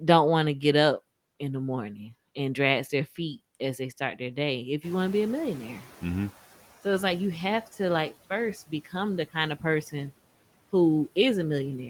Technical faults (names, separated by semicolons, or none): noise suppressor catching up; speech cut by the noise suppressor